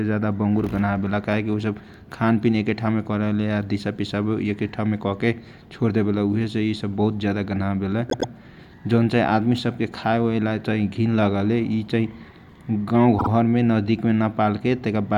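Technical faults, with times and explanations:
8.09–8.30 s and 13.18–13.29 s, repeated frames: a short run of compressed frames got written more than once, so the decoder plays the same slice again, a block of about 104.5 ms heard twice more at the first spot and about 52.2 ms twice more at the second. You get a quick stutter, and the clip runs about 209 ms and 104.5 ms longer there.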